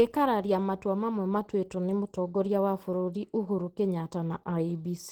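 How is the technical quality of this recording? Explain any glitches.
The recording carries plainly audible Opus compression from start to finish. The encoder, likely starved of bits, appears to be running in its hybrid speech mode, which fits a low bitrate of around 16 kbps. With too few bits to describe every band, fine spectral detail is replaced by approximations, so the speech comes across as hoarse and muffled, with a rough, grainy texture. The bandwidth stays wide, reaching up to about 20.1 kHz.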